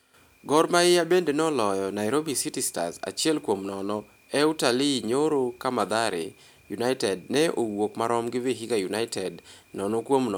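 Nothing technically wrong turns up anywhere in this bit of speech, so there's no problem here to time or trace back to a cause.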